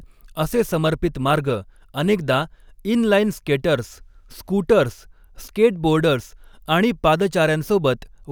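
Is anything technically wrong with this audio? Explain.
Yes. From 0.0 to 2.46 s there is periodic clock jitter: interference wobbles the converter's sampling clock at around 100 Hz, adding sidebands about that far either side of every speech component, strongest higher up. The result is a rough, metallic edge that disappears in pauses.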